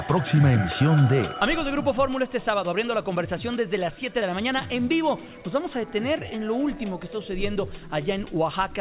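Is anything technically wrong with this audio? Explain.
No, nothing is technically wrong.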